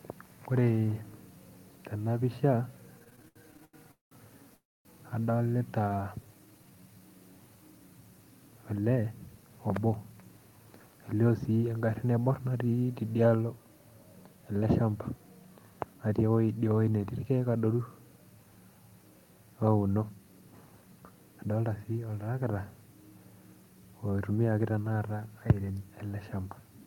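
Repeated stalls (stutter) run from 2.99 to 4.13 s. The jitter buffer ran empty fifteen times, and the receiver stretched the last sound to fill 479 ms, the longest gap 200 ms, so the speech drags and stutters.

A call audio freeze follows at 4.55–4.87 s. Packets were likely held up in transit. The stretched sound fades into 250 ms of silence before the speech resumes where it stopped, adding a 297 ms delay.

A jitter buffer slow-down at 5.90–7.00 s repeats pitch periods to rebuild the reserve. It adds 166 ms and plays at 86% speed with the same pitch, so sounds are drawn out.

Jitter buffer speed-up occurs at 8.75–11.14 s (112%, roughly 0.3 s trimmed), 15.78–16.31 s (113%), 19.95–20.42 s (112%) and 24.10–24.85 s (111%). The receiver was cutting excess buffered delay, so the speech sounds hurried at an unchanged pitch.

Microphone overload appears at 25.50–25.52 s. Peaks about 4 dB over the converter's limit, likely from too much input gain, have their tops flattened on roughly a fifth of the samples, giving a brief harsh crackle.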